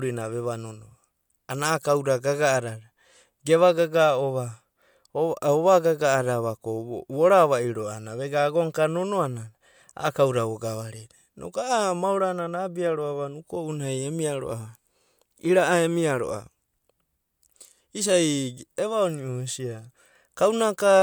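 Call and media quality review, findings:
No faults found in the speech recording. Nothing to escalate on this ticket.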